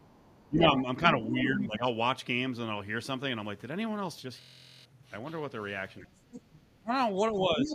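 From 0.0 to 1.5 s a second, quieter voice sits under the speech, about 10 dB down: the other side's voice leaking through, likely loudspeaker echo that the echo canceller left behind. It is a separate talker, not a repeat of the main voice. Starting during it, at 0.48 to 0.85 s and 1.29 to 1.85 s, the main speech dips sharply: speech suppressed in double talk, likely the canceller ducking both voices at once. These are dropouts, not added sound. From 4.41 to 4.85 s one 23.22 ms fragment repeats 19 times as a 43.1 Hz buzz, a system hang loop that fits a 1024-sample buffer. Unlike a dropout, it repeats audio exactly. Suppression returns at 6.01 to 6.13 s and 6.79 to 6.91 s, the second dip very deep. Faint leakage comes between them at 6.31 to 6.59 s, and louder leakage with a slight dip runs from 7.34 s to the end.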